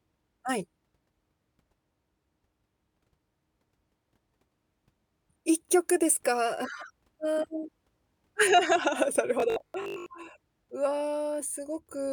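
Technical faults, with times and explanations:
9.40 to 10.08 s, robotic sound from repeated short buffers: the speech turns into a rigid, metallic buzz at 50 Hz that still loosely tracks the words. The likely cause is audio arriving too slowly, so playback fills the gaps by looping the last stretch of sound while the real audio is dropped. A 50 Hz buzz fits a repeated chunk about 20 ms long, and roughly half of this passage is made of those repeats.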